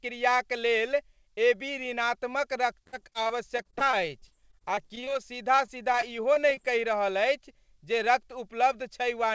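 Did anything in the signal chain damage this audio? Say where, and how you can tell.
Yes. Repeated packet loss (robotic sound), a network-stage fault, appears from 2.84 to 5.17 s and again from 5.56 to 6.59 s. Short holes, up to 51 ms, are bridged by repeating the last sound, so the speech turns choppy with pieces missing. A spectrogram shows stuttering, smeared harmonic blocks.

Jitter buffer slow-down in the receive buffer stretches 3.75 to 6.23 s to 96% speed, adding about 99 ms. The pitch holds while sounds drag. On the waveform, identical pitch periods repeat back to back.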